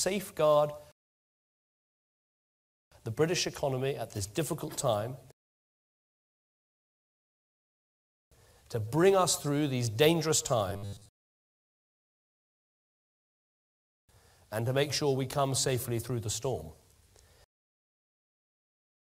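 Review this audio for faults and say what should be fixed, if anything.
From 10.70 to 12.29 s there's robotic sound from repeated short buffers: a rigid, metallic buzz at 100 Hz. That's likely a roughly 10 ms chunk being replayed for most of the stretch because fresh audio wasn't arriving. A larger jitter buffer or steadier delivery should prevent it.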